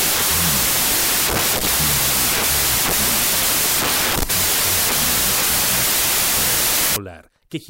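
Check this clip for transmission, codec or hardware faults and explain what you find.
There is one fault, covering nearly the whole clip.

From 0.0 to 6.96 s, a wrong sample width fault makes loud hiss-like noise swamp the sound, which plays at half speed and an octave low. Samples stored as 32-bit integers are being read as 16-bit ones, so each splits in two. The upper halves carry the real signal, the lower halves produce noise, and the doubled sample count halves the playback speed.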